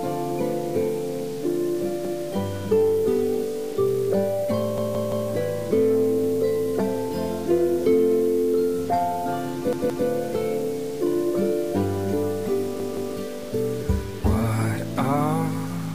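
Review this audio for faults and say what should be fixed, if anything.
Repeated buffer: the playback device was starved of new data and replayed its last block, about 171 ms long, which fits an 8192-sample buffer. The audio stutters with hard joins at 2.05–2.22 s, 4.78–5.29 s, 9.73–10.07 s and 12.80–13.14 s. Enlarge the output queue or raise the feeding thread's priority so each block arrives before the device needs it.

Low bit depth without dither: the signal was likely truncated to about 6 bits with no dither, so grainy distortion tracks the sound throughout, sitting about 25 dB below it. Keep a full bit depth through processing, and add dither whenever word length must be reduced.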